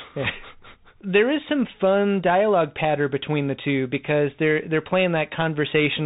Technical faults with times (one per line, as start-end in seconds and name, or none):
0.00-6.05 Bluetooth CVSD headset codec